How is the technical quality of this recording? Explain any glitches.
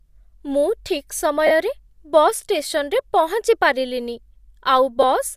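The recording has two brief dropouts from lost LE Audio frames. Just after "ମୁଁ ଠିକ୍", from 1.47 to 1.51 s, and again at 5.02 s, the speech turns into a short noisy smear. The LC3 decoder, from the light Bluetooth LC3 compression likely in use, filled each gap by repeating the last spectrum with scrambled signs. The first gap fits about five lost 7.5 ms frames, the second a single frame.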